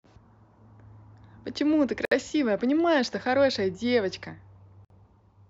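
A speech clip with two brief dropouts: a gap opens at 2.05 s for about 64 ms and at 4.85 s for about 54 ms, then the speech resumes where it stopped. These are gaps at a join of encoded pieces, where separately encoded segments were joined with their encoder start delay and end padding left in.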